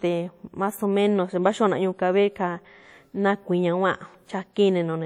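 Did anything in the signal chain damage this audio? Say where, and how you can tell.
Yes. From start to finish the speech has a washy, ringing quality, with a hiss that swells and fades along with the syllables, and quieter detail seems to drop out. That points to the codec stage, most likely WMA compression at a low rate, fitting roughly 48 kbps. Its long transform blocks smear quantisation noise over tens of milliseconds around each sound, and the encoder discards weak spectral lines outright.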